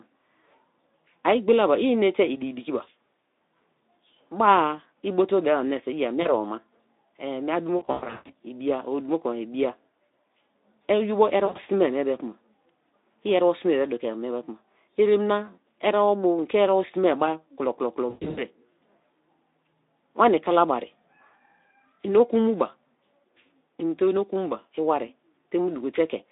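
At 6.21 s, 7.77 to 8.34 s, 11.45 to 11.60 s (just before "mie be") and 18.09 to 18.43 s, VoIP packet loss concealed by the speech codec stretches the speech into a buzzy tone or a coloured noise that fades. Missing audio totals 40 ms, 360 ms (longest gap 140 ms), 100 ms and 220 ms (longest 120 ms). This fits 20 ms frames. The decoder repeats its last pitch and filter at falling gain. On a spectrogram, harmonics flatten into steady horizontal bands that dim. The waveform shows smoothly shrinking envelopes over the narrow Speex line band.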